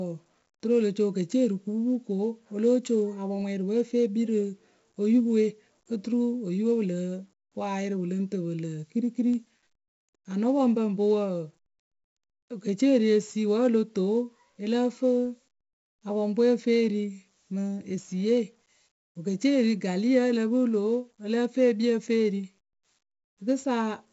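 4-bit ADPCM compression runs through the whole clip, start to finish. Each sample is coded as a coarse 4-bit step from a predicted value, with the step size adapting as the speech moves, so the quantisation error rides along with the level. It is heard as a heavy, gritty hiss clinging to every loud syllable and roughness on sharp onsets. Nothing remains above 7.7 kHz, dulling the top end, which fits a 64 kbps stream.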